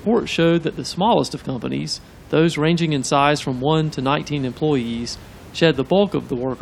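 No technical faults can be heard in this recording.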